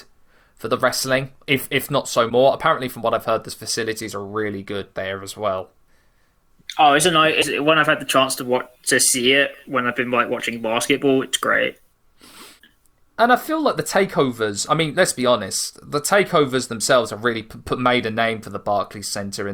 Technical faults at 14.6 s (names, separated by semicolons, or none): none